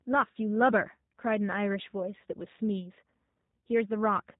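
From start to finish the speech carries G.729 codec damage, plainly audible. The sound is rebuilt from a vocal tract filter, a pitch predictor and sparse pulses. Nothing above 4 kHz survives. Voices sound rough and synthetic, which fits roughly 8 kbit/s G.729A.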